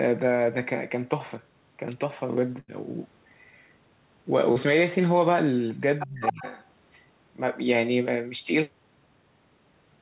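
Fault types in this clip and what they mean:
Burst of packet loss: From 2.60 to 2.70 s, about 80 ms of the speech never arrives, and the receiver stretches the last sound across nearly all of the hole before fading it. The result is a held buzz or a dying hiss, followed by speech resuming further along with a piece skipped. That length, and the audible jump in content, set it apart from the brief smear of a short concealed loss.
Short concealed packet loss: Around 4.52 to 4.57 s, roughly 40 ms fails to reach the decoder in time. The gap is patched by continuing the preceding sound and blending back into the real audio. What comes through is a quick smear or wobble, perhaps swallowing a consonant, rather than a held tone. It is too brief to leave an obvious skip, which distinguishes it from the longer burst at 2.6 s.
Other side's voice leaking through: A second voice appears under the talker, likely loudspeaker echo the canceller failed to remove. 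It shows first from 5.99 to 6.07 s at about 10 dB below the main speech, then from 6.24 to 6.63 s at roughly equal level. Unlike double-talk suppression, this adds sound that doesn't belong rather than removing the talker's own.
Speech suppressed in double talk: Between 6.06 and 6.45 s the talker's voice dips, dropping by around 30 dB at its deepest over roughly 300 ms in total. It is likely the echo canceller clamping down while both sides talked at once. What marks it out from the leak is that the main voice itself disappears, overlapping the moments when the other voice surfaces.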